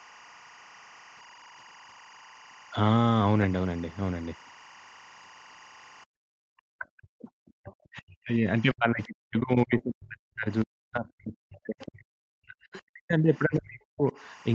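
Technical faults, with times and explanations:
Throughout, timecode bleed: there's a steady chirpy warble sitting well below the speech, flipping between roughly 1 and 2 kHz. That's linear timecode at 23.976 frames per second leaking in from a neighbouring track or cable, its square wave toggling between two pitches.
6.05 to 6.3 s, background gated by the echo canceller: the room tone ducks hard, about 40 dB at its deepest, for around a third of a second. The canceller clamped the mic while the loudspeaker played, then let go and the background came back.
6.58 to 8.52 s and 8.72 to 14.14 s, speech suppressed in double talk: the talker dips and breaks up, sometimes very deeply, over roughly a second and a half and then about five seconds. Likely both ends talking at once, so the canceller couldn't separate them and pulled everything down.
7.69 to 7.73 s, 11.81 to 11.86 s and 12.73 to 12.81 s, other side's voice leaking through: brief, faint scraps of a second voice, well under the talker. 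Likely loudspeaker echo the canceller didn't fully remove.
9.77 to 9.81 s, short concealed packet loss: a quick smear lasting about 20 ms, where the receiver stretched the preceding sound to cover a hole in the call audio and then blended back into the real signal.
9.79 to 9.81 s, lost packet rebuilt from error correction: those last 20 ms sound rougher and noisier, which points to a single lost packet replayed from the low-bitrate Opus copy carried in the next one. On this call, already capped at 8 kHz, there's no separate top-end dip.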